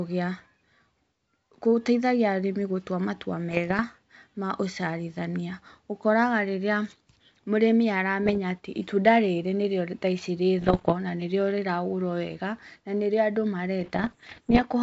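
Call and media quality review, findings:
Bit errors on an ADPCM link: pops and rough bursts with brief level jumps at 3.49–3.83 s (after "gũtaithagia arĩmi gũtua matua", before "ma ũciarithania"), 8.23–8.38 s, 10.58–10.94 s, and 13.80–14.62 s. Flipped bits derail the decoder's step size and predictor, so each error rings for milliseconds. The heaviest bursts are at 10.58 s and 13.80 s. The G.722 wideband band stays clear between bursts.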